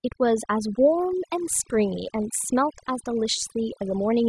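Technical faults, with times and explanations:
Throughout: overdone noise removal. A noise reduction process was pushed too hard on this speech. It pulls individual frequency bands far down or shuts them off whenever their level sits close to its noise estimate. The soft parts of the voice fall under that threshold too, so they vanish along with the noise. Between phrases the background drops and breaks up into brief twinkling specks.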